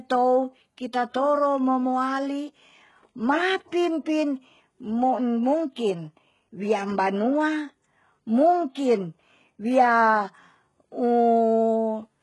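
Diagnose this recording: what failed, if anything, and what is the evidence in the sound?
It's a codec-stage problem running through the whole clip. The speech has heavy codec damage, nothing above 11.4 kHz, and treble that sounds synthesised. That's likely HE-AAC compression at around 12 kbps, where spectral band replication copies lower bands upward under a coarse envelope rather than coding the real harmonics.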